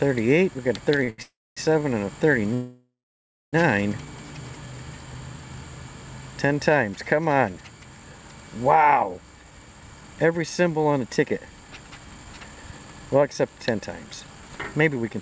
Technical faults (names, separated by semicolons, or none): short stall from a late packet; call audio freeze; jitter buffer speed-up